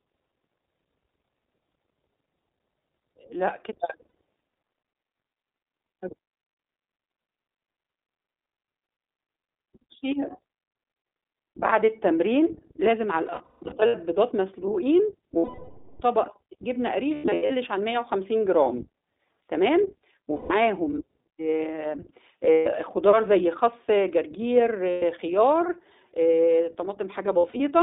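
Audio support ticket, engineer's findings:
iLBC codec, whole clip: speech band-limited to about 300 Hz to 3.7 kHz, slightly rough and synthetic. Narrowband frame-by-frame excitation coding, consistent with 20 ms frames at 15.2 kbps.

Lost iLBC frames at 4.08, 13.26 to 13.95 (scattered), 15.38 to 16.02, 17.14 to 17.52 (scattered), 20.36, 22.52, 24.90, 27.38 s: held buzzy vowel-like fill, longest 0.62 s. Decoder concealment repeats last pitch cycle; self-contained frames give near-instant recovery.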